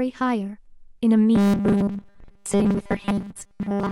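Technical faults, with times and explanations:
1.35 to 3.91 s, robotic sound from repeated short buffers: fresh audio likely stopped arriving in time, so playback kept looping a 5 ms slice while most of the real signal was skipped. Those repeats impose a rigid 200 Hz buzz that turns the speech metallic, though its rough shape survives.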